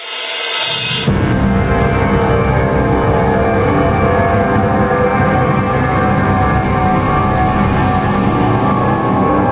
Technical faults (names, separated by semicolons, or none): gain pumping